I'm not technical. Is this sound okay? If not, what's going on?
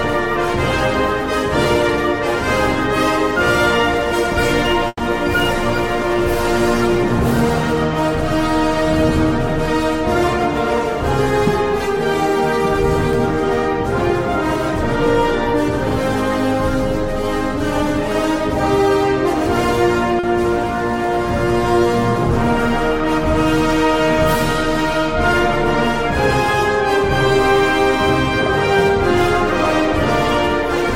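No. There are two brief dropouts where parts of the sound never arrived in time.

From 4.87 to 5.01 s there is a burst of packet loss. About 120 ms of audio is missing. The player tried to cover the hole by stretching out the last bit of sound it had, letting it fade, and near the end it goes silent for about 30 ms. When the sound comes back it has skipped ahead, so that stretch is simply gone.

From 20.19 to 20.25 s there is a short concealed packet loss, about 40 ms. The player patched this much smaller gap by continuing the sound briefly and blending it back in, so you hear only a quick smear or wobble. Compared with the burst at 4.87 s, there is no fade into silence.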